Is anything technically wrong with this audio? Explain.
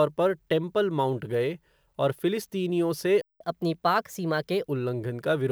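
Yes. The speech cuts out once, then runs fast for a while.

The first fault is a playback stall from 3.21 to 3.41 s. The sound stops mid-flow and leaves about 187 ms of silence. Then it resumes. The likely cause is a player that ran short of data or had its audio thread blocked. Output went dead until the buffer refilled. You hear a clear hole in the speech, long enough to notice.

The second fault is catch-up at higher speed, from 3.41 to 4.65 s. The player resamples its backlog to make up the lost time. Playback runs at 1.15 times normal speed. Because speed and pitch move together, the voice rises by about two semitones. It sounds hurried and slightly chipmunk-like. At 4.65 s both speed and pitch drop back to normal.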